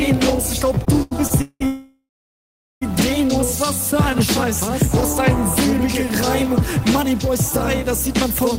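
Packets kept arriving late between 0.75 and 1.62 s, draining the jitter buffer five times. The result is repeated stalls (stutter): the last sound is stretched to cover each gap, the longest about 186 ms, so 38% of that stretch drags and stutters while nothing is lost.

From 1.66 to 2.83 s, a call audio freeze likely follows packets being held up and the jitter buffer running dry. The last sound is held and fades to silence for about 770 ms, then resumes where it stopped, about 1.15 s late.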